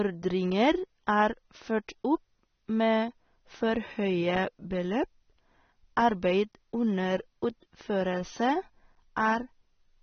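From start to finish the speech sounds dull and smeared, with nothing above about 6.3 kHz, so sibilants lose their crispness and turn fizzy while sustained sounds take on a warble. This is plainly audible AAC compression, likely AAC-LC at a low rate that fits roughly 24 kbps. Short of bits, the encoder drops the top band entirely and quantises the remaining spectrum coarsely, leaving gaps that the ear hears as swirling texture.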